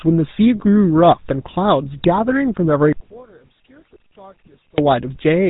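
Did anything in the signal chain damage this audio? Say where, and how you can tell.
Yes. For the whole clip the speech has a buzzy, gravelly roughness, and nothing reaches above 3.8 kHz, so the upper sibilance and air are gone. That points to the codec stage, specifically the GSM full-rate codec at 13 kbps. It rebuilds each voice from a vocal-tract model driven by a coarse pulse train that keeps only a third of the excitation detail. That sparse excitation produces the gritty buzz, and the narrow band explains the missing top.

From 2.93 s to 4.78 s the speech nearly vanishes, dropping by about 33 dB, then returns at full level. A centred voice collapsing that deeply is the mark of cancellation. The likely cause is one channel inverted, with one stereo leg's polarity flipped in the wiring or routing so that summing to mono subtracts the shared centre content. What survives is only the tiny difference between channels, heard as a faint residue.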